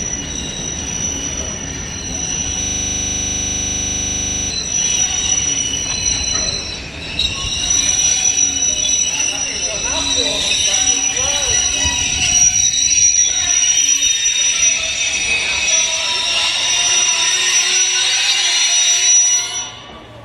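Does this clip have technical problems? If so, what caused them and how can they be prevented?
Yes. From 2.63 to 4.50 s there is a system hang loop. The computer or its audio driver stalled while the sound hardware kept replaying the same 40 ms of its ring buffer, about 47 times, so the audio turns into a rigid 25 Hz buzzing stutter. A dropout would leave silence instead, but here one fragment repeats identically. Prevent it by giving the audio thread real-time priority and fixing the driver so a stall mutes output instead of recycling the buffer.

Brief clicks or tiny skips fall at 7.47, 9.48, 11.46, 13.45, 15.43, 17.41 and 19.39 s. This is an overlap between stream segments. The time stamps of adjacent pieces overlap, so the player trims roughly 6 to 18 ms of audio that was never actually duplicated, and the waveform jumps. Unlike a dropout gap, nothing goes silent; sound simply goes missing. 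The regular spacing of about 2 s fits 2-second segments. Prevent it by stamping segment boundaries exactly and contiguously at the encoder or packager.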